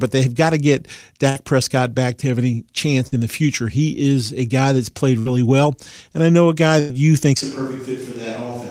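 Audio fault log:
1.29 s, 3.07 s, 5.19 s, 6.79 s: burst of packet loss. Four gaps of roughly 80 to 120 ms each, the first just after "they've got to get" and the last between "I know a guy" and "you think's". In each, the receiver had nothing to play, so it extended the preceding sound for about 45 to 100 ms while fading it into a brief buzz or hiss. Playback then resumes with a similar stretch of audio missing, which gives a clipped, jumpy join.
7.44 s to end: switch to a distant microphone. Right after "you think's", the sound suddenly becomes roomy and hollow, loses low end and drops by about 10 dB. Room noise also rises to sit only about 25 dB below the speech. The cause is likely that the close microphone dropped out and the recording continued on a pickup farther from the talker, which captures more reflections and ambient noise. The change lasts until the end of the clip.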